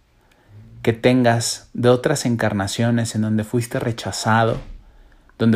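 No technical faults can be heard anywhere here.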